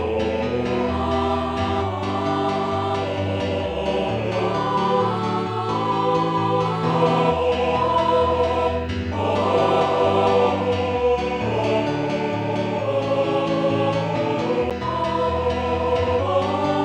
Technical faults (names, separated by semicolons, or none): CD skip